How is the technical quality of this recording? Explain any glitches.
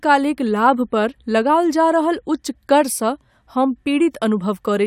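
Nothing stood out on listening to the recording, so there are no glitches to explain.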